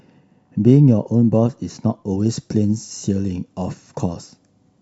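From 2.26 s to the end, the speech has pre-emphasis left on. A treble boost applied before recording or transmission was never undone by the complementary de-emphasis stage, so the upper range stays lifted by about 8 dB at 10 kHz relative to 1 kHz. The shape of that lift fits the CD 50/15 µs curve. The result sounds thin and overly bright, with exaggerated sibilance and a loss of body compared with the opening section.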